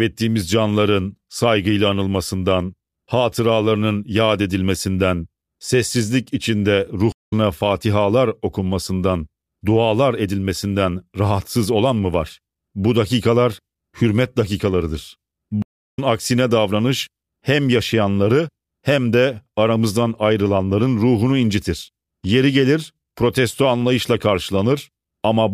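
Stream reconnects at 7.12 s, after "yad edilmesinden sessizlik içinde", and at 15.62 s, after "dakikalar hürmet dakikalarıdır". Each time the connection broke, leaving 195 ms and then 352 ms of silence. A fresh decoder resumed the speech roughly a fifth of a second later, so a short stretch is skipped.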